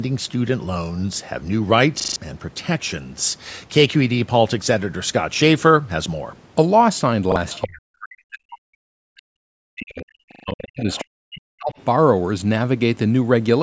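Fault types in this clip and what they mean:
Repeated buffer: A 40 ms slice of speech plays again with a hard join, giving a stutter at 2.0 s (four extra repeats), 7.32 s (one) and 10.32 s (three). Unlike a dropout, the gap is filled by the same piece heard repeatedly rather than silence.
Other side's voice leaking through: A second, fainter voice appears in scraps at 7.52, 10.79 and 11.72 s, about 10 dB, then 15 dB below the talker, then barely audible. This is likely loudspeaker echo the canceller missed. It is a separate voice layered on top, not background noise.
Speech suppressed in double talk: From 7.65 to 11.75 s, about four seconds, the talker's level sinks in pieces, at its deepest by roughly 40 dB, while the far side plays on the loudspeaker. The echo canceller likely turned both down. Unlike a dropout, the talker fades, dips or cuts out in pieces rather than the whole signal stopping.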